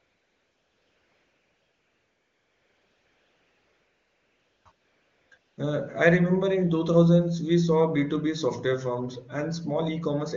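From the start to about 4.65 s, the background is AMR comfort noise. The phone decided nobody was talking and stopped sending speech frames, so the far end fills the gap with smooth, steady synthetic hiss rebuilt from a rough level-and-spectrum sketch. It drops out briefly, then returns from 4.71 to 5.31 s and again from 5.37 to 5.57 s, so the texture flips in and out in quick succession. The speech itself comes through clean wideband AMR.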